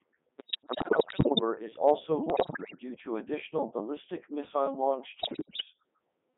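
Codec 2 vocoder processing runs through the whole speech clip. The decoder rebuilds the voice from sine waves driven by pitch, voicing and envelope parameters, so the result is robotic and buzzy, confined to about 150 Hz to 3.5 kHz, and heavily damaged, consistent with the 3.2 kbit/s mode.

Bit errors on digital voice radio occur from 0.38 to 1.41 s, ending just before "is also"; from 2.30 to 2.79 s, between "is also" and "to additional ballistic missile"; and from 5.20 to 5.63 s, after "additional ballistic missile launch". Corrupted frame parameters make the pitch, level and tone colour jump into warbles and gibberish. The error rate sounds like roughly one bit in ten, heavier in the last burst.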